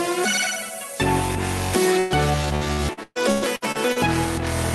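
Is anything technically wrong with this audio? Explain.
Yes. From 1.99 to 4.08 s the sound turns choppy and robotic. This is repeated packet loss: nine gaps, the longest 123 ms, each patched by stretching the preceding audio.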